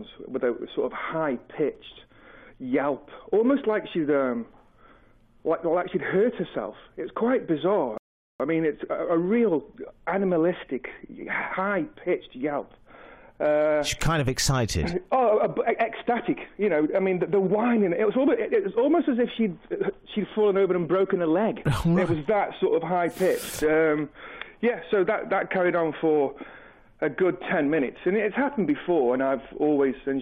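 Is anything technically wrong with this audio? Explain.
Yes, there's one glitch. At 7.98 s the audio hits a rebuffering stall: the player ran dry of downloaded data and waited for more. You hear it drop to silence until 8.40 s, then pick up exactly where it left off, with nothing missing but 421 ms of dead air added.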